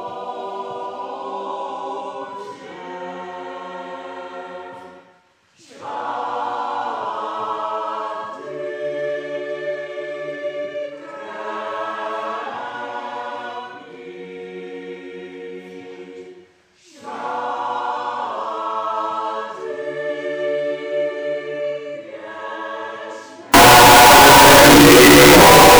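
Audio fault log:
23.54–25.80 s, float read as integer: the sound abruptly turns very loud, harsh and buzzy, with quiet background raised to the level of the main sound, though pitch remains traceable. Likely 32-bit float samples read as 32-bit integers, so sign and exponent bits drive each value toward a near-square wave at an almost fixed, high level.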